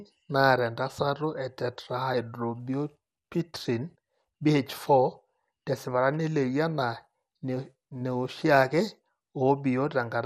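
From start to finish the speech sounds dull, with nothing above 15.1 kHz and a gurgling, granular roughness as upper bands flicker in and out. This is likely MP2 compression, with plainly audible codec damage that fits a low bitrate around 80 kbps.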